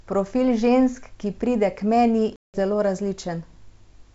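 Packet loss on an ADPCM call cuts a hard-edged 180 ms hole into the G.722 wideband speech from 2.36 to 2.56 s, which fits roughly ten lost packets. The gap is filled with silence, and the decoder's adaptive predictor and step size lose step with the sender's.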